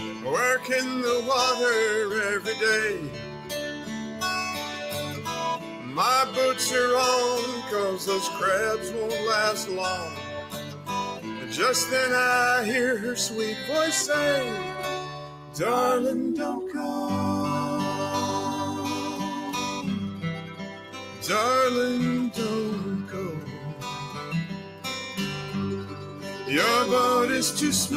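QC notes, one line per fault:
Throughout: noise suppressor applied to music or sounds. A suppressor tuned for speech stays active across the whole clip and keeps treating steady tones, ambience and decaying tails as noise, so its gain swings by roughly 10 dB as the material changes. Onsets pass close to full level, while whatever is sustained sinks behind them, which gives a pumping, fluttering, thinned quality. Unlike a compressor, which reacts to loudness, this follows how steady the sound is, so quiet transients survive while loud held tones are pulled down.
0.0–0.7 s, 2.98–6.35 s, 10.06–11.54 s, 15.04–15.59 s, 20.43–21.23 s, 23.05–24.85 s, 25.46–26.44 s: sound cut by the noise suppressor. In each span the suppressor decides the sustained or fading part of the sound is noise and pulls it down by about 7 to 8 dB, more than elsewhere. Decays end early and held portions dip, adding up to roughly 0.4 to one and a half seconds of cut material per span, while sharp attacks inside them mostly come through. 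A dropout or mute takes everything; here only the steady parts thin out.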